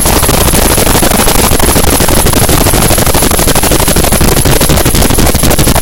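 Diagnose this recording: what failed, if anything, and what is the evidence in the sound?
A converter or sample-format stage was driven about 7 dB past full scale, cutting roughly a sixth of samples flat: hard clipping, with the flat tops adding harmonics far up the spectrum throughout.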